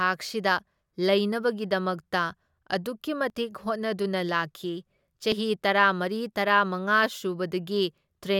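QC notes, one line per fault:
3.3 s and 5.32 s, dropped buffer (overrun): a sudden jump in the speech, once just after "ꯑꯗꯨꯛꯀꯤ" and again just after "ꯂꯥꯛꯈꯤ". Each time, roughly 20 ms of audio goes missing and the two sides butt together with no silence between them, likely because the samples weren't read before the hardware overwrote them. On a waveform there is a sharp discontinuity with no gap. On a spectrogram a thin vertical broadband line appears, and the harmonics shift abruptly at that point.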